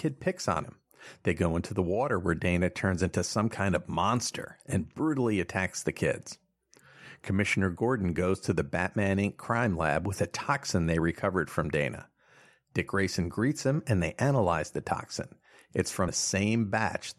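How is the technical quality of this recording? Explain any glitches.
Three brief glitches break into the speech, at 0.63 s, 12.87 s and 16.07 s. Each is a tiny chirp or blip lasting under 20 ms that doesn't belong to the speech around it. All three come from damaged data in a compressed stream. Corrupted bytes made the decoder misread those frames and lose sync until it found the next valid frame header, and the bad data came out as that short burst.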